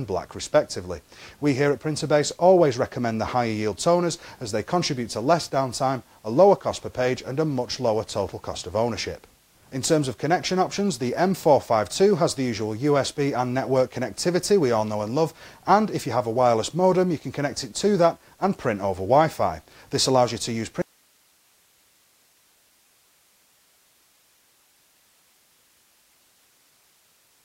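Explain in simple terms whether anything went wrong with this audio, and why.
An audio dropout to a faint residue starts at 20.82 s and runs to the end. The sound cuts off abruptly, leaving only soft hiss far below its normal level, most likely because the signal was lost while the recording path stayed live.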